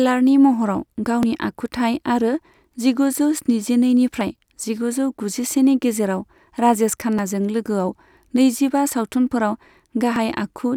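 Short skips jump the speech forward at 1.23, 4.21 (just before "जिगुजौ गुजिसेनि"), 7.19 and 10.16 s, roughly 20 ms each, spliced without silence. The steady 3 s spacing points to audio missing between chunks, likely dropped while one recording block closed and the next opened.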